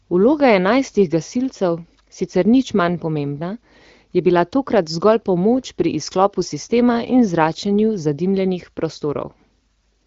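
Nothing goes wrong anywhere in this speech clip, which sounds like it came over a normal HD Voice (AMR wideband) call, with its usual top end stopping at about 7 kHz.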